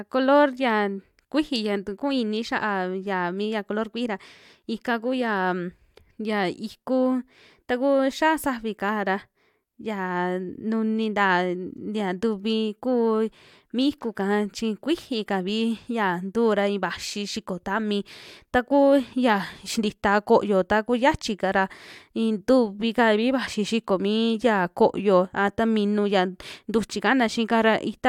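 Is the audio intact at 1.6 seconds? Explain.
Yes, at 1.6 seconds the speech plays through intact, with no dropout, click, distortion or other fault to be heard at that point.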